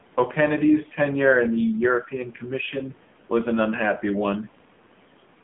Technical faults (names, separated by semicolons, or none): AMR narrowband mobile codec